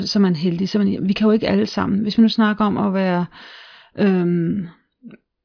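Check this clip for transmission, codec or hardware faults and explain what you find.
Listening closely turns up no transmission, codec or hardware fault anywhere in the speech signal.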